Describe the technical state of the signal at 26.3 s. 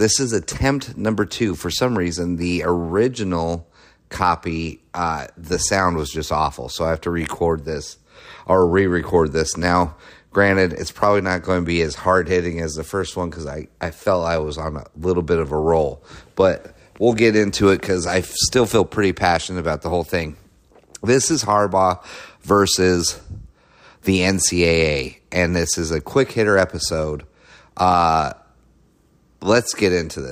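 Around 26.3 s the signal is intact, with no audible technical fault at that point in the speech.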